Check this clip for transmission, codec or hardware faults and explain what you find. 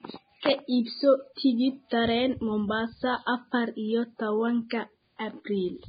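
One codec fault runs through the whole speech clip: heavy lossy compression, likely Vorbis compression at a very low rate, around 15 kbps. Nothing is present above 4.9 kHz, and the remaining treble is coarsely quantised, so fine detail turns into hiss-like noise. Consonants sound grainy and attacks blurred. Unlike a plain low-pass filter, the band below the cut-off is roughened too, not just dulled.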